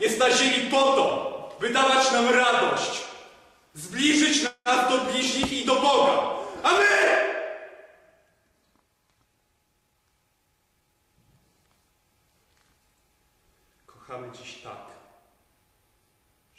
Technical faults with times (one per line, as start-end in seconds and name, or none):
4.47-4.68 call audio freeze